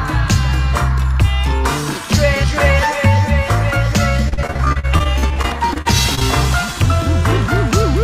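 Overlapping chunks appear at 2.47 s, again at 4.98 s and at 7.49 s, a steady 2.5 s apart. Each new chunk begins about 13 ms before the previous one finished, so that sliver plays twice and leaves a click or stutter at every join.

Repeated packet loss gives a robotic sound from 4.29 s to 6.23 s. Short holes keep opening, the longest about 42 ms, and each is patched by stretching the preceding sound, so about a quarter of the passage is filled-in material. The result is choppy, with fragments missing, and the 4.98 s chunk join falls within it.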